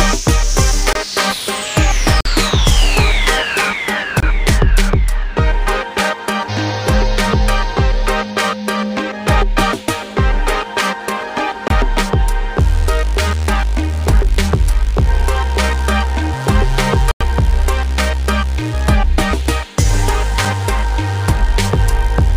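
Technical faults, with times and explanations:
0.93–20.45 s, blocks of digital silence: ticks and short holes at 0.93, 2.21, 4.20, 11.68, 17.11 and 20.45 s, lasting about 23, 46, 23, 23, 93 and 6 ms. The sound drops abruptly to silence and back, with no fade. The first five lengths are whole multiples of 1024 samples, likely output buffers that weren't filled in time.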